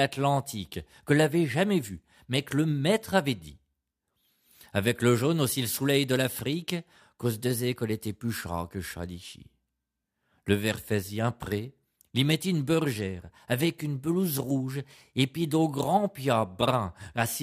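No technical faults can be heard anywhere in the recording.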